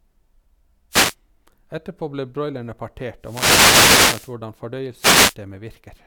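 The radio link from an analogue FM wireless microphone is fading as reflected signals cancel at the receiver, and this speech recording carries three wireless microphone noise hits as a result. Receiver noise surges in as short bursts of static at 0.90–1.15 s and 4.99–5.35 s. A longer hit runs from 3.20 to 4.36 s, just after "ble broilerne".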